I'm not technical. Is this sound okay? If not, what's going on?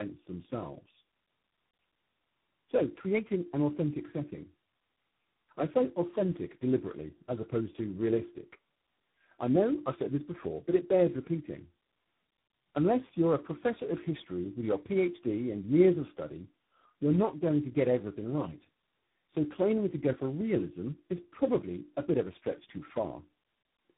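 No. The speech has tandem speech coding from start to finish. On its way here, the call passed through three telephone networks in a row, each using a different method of squeezing speech down for transmission. At every handover the sound was unpacked and squeezed again, and each step added damage to the last. The result is rough, muffled and warbly. Nothing above about 3.8 kHz remains, so hissy sounds like s and f lose their crispness.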